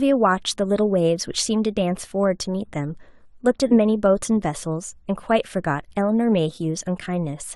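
At 3.70 s, compressed frames are skipped: a short stretch of about 50 ms never gets decoded, so the speech jumps forward. A spectrogram shows an abrupt discontinuity in harmonic tracks there.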